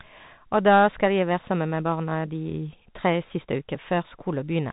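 From start to finish the whole clip runs through a Bluetooth CVSD headset codec, and the damage is plainly audible. The speech is squeezed into a narrow band with nothing above 3.8 kHz, which fits the 64 kbps headset link. CVSD sends just one bit a sample, up or down, with an adapting step size, so loud high content outruns the step and distorts, s sounds come out scratchy, and a grainy hiss sits under the speech.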